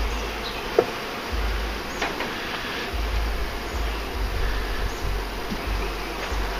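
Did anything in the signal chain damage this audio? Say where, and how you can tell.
No, nothing in the chain audibly damaged this audio.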